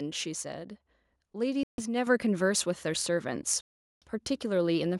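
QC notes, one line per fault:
1.63–1.81 s and 3.61–4.04 s, Bluetooth stall: the speech drops to silence for 148 ms, then 407 ms, and resumes. Likely a wireless buffer running dry while delayed packets were resent.
2.07 s, microphone volume stepped up: the voice and background jump together by about 6 dB in one step. The input gain was raised.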